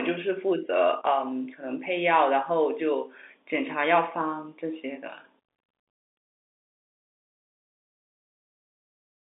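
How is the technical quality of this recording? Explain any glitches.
No audible glitches or faults.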